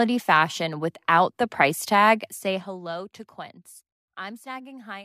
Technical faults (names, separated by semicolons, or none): zipper noise